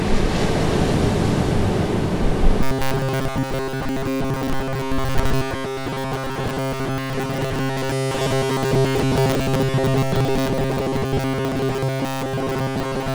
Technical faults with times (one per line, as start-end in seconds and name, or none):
2.63-13.14 robotic sound from repeated short buffers